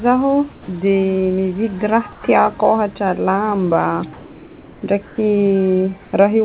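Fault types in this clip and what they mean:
Comfort noise in place of the background: four pauses turn flat and featureless, up to about 7 dB quieter, likely synthetic noise filling gaps in discontinuous transmission.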